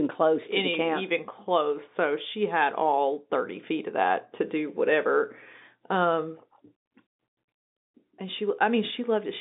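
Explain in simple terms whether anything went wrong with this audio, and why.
Nothing went wrong here: the speech simply has the slightly narrow, boxy sound of an ordinary phone line, which carries nothing above about 3.8 kHz, and that's just how G.711 telephone coding works.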